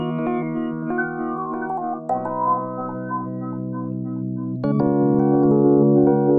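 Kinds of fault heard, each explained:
Wrong sample rate: the audio plays back about 1.45 times faster than it was captured, consistent with 22 kHz material played at 32 kHz, so everything runs hurried and about 6.45 semitones higher; a spectrogram shows events squeezed in time and every frequency band shifted upward.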